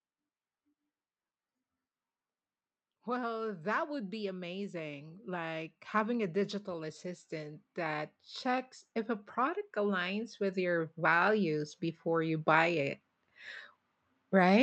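Automatic gain rising from 2.88 to 8.73 s and again from 9.34 to 12.9 s: the gain control judged the input too quiet and ramped its gain up, by about 12 dB and then about 6 dB, so the speech and background noise swell together.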